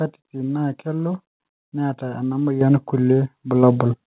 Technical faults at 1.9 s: none

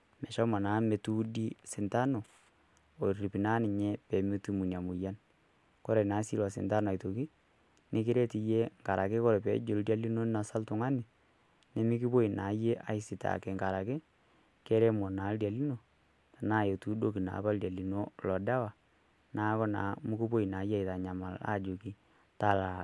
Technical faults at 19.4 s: none

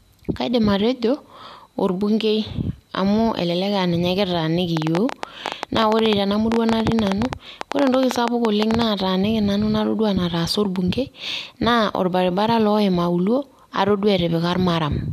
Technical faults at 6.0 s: train of clicks

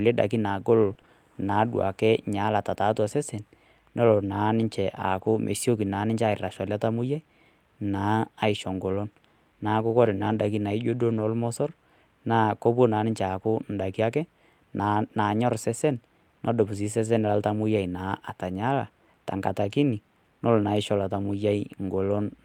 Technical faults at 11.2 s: lost packet rebuilt from error correction

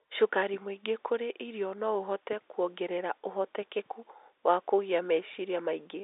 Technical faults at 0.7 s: none

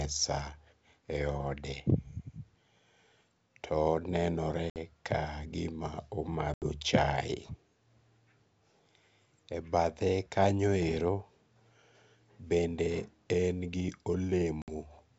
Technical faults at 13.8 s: none

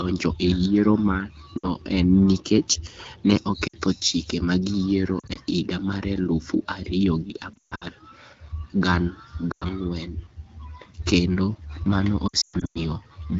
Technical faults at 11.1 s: none

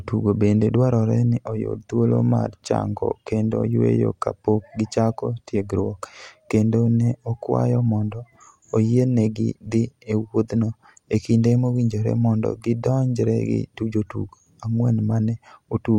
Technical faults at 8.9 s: none

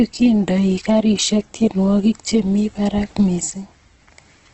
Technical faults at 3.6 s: Opus compression

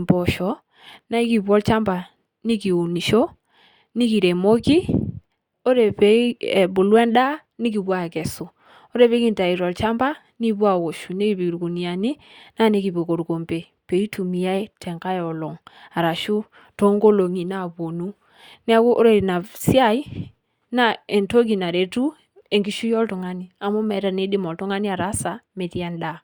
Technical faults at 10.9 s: none

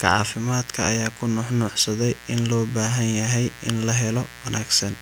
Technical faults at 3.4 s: mains buzz

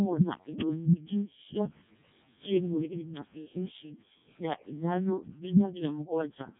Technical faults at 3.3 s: Codec 2 vocoder

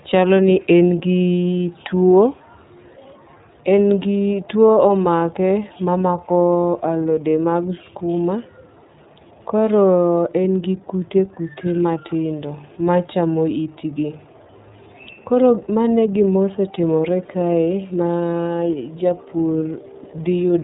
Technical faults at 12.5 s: iLBC codec

